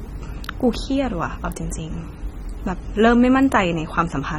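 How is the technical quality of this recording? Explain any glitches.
The recording has plainly audible compression damage running through the whole speech clip. From start to finish the sound is dull and smeared, with a watery, warbling texture on held vowels and a fizzy edge on sibilants. Nothing comes through above about 17.2 kHz. That's likely AAC compression, an AAC-LC encode at a low bitrate, something like 24 kbps. The encoder quantises each frame's frequency lines coarsely, drops detail it judges inaudible and leaves gaps, so the spectrum keeps shifting and smearing.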